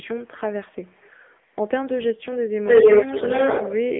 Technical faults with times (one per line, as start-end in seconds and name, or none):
0.00-3.99 AMR narrowband mobile codec
0.00-0.40 echo leak
0.70-1.45 echo leak
2.11-2.64 speech suppressed in double talk
2.65-3.99 echo leak
3.88-3.94 speech suppressed in double talk